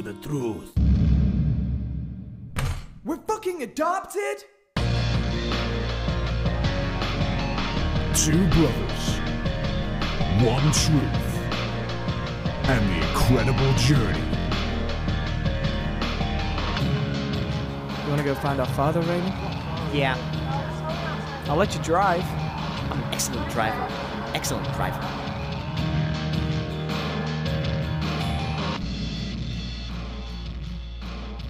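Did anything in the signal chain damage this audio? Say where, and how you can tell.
Yes. The Bluetooth wireless link dropped or delayed audio packets, and the receiver filled the gap by replaying its last buffer, a Bluetooth stutter. From 14.40 to 14.48 s a short slice repeats as a brief machine-gun buzz, covering about 70 ms, which fits roughly three lost frames, then the sound resumes further along.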